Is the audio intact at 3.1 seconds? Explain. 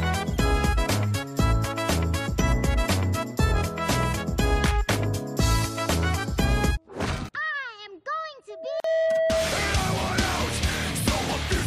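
Yes, the audio is intact at 3.1 seconds, with no audible fault at that moment.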